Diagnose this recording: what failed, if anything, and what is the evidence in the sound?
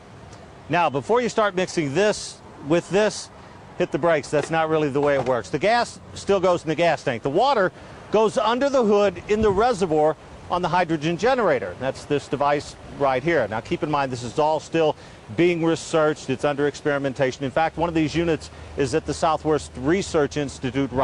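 Nothing failed; no stage shows audible trouble.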